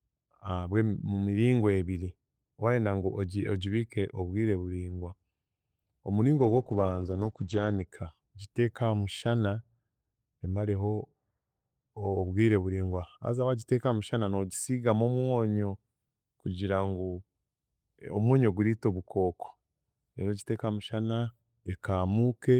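From 6.38 s to 7.93 s the speech goes through a call bitrate drop. The call's bandwidth estimate fell and the encoder was pushed from 32 kbps down to 11 kbps, where it stayed for about 1.4 s. At that rate the codec quantises more coarsely and narrows the audio band from 20 kHz to 8 kHz, so the voice turns muffled and rough and watery. It regains its clarity once the bitrate climbs back.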